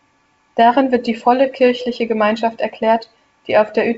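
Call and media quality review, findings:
No faults found: the speech passes through G.722 wideband coding at 64 kbit/s with bandwidth reaching about 7 kHz and at most a faint upper-band hiss from the codec.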